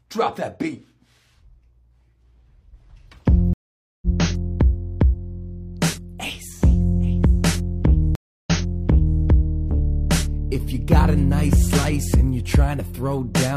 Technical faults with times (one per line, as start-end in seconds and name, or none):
3.53-4.06 stream reconnect
8.15-9.20 stream reconnect